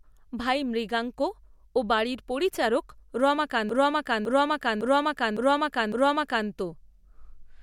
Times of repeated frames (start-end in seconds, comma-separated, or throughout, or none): 3.69-6.48